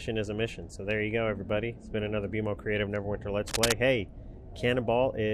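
A short burst of cable scratch noise hits the audio from about 3.48 to 3.73 s, a quarter-second of dense, ragged rustling that sits roughly as loud as the sound itself. It's likely a worn cable or connector being moved, so its contact resistance jumps around.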